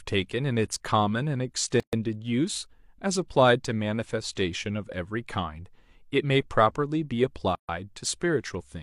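At 1.80 s and again at 7.55 s the speech drops into silence for about 130 ms and 137 ms: a gap at a join of encoded pieces, where leading encoder delay and final-frame padding were never trimmed. Edges are smeared by the codec, and speech resumes where it stopped.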